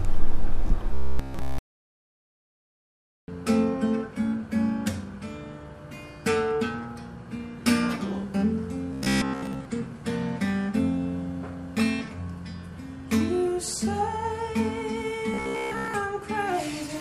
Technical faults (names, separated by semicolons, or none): robotic sound from repeated short buffers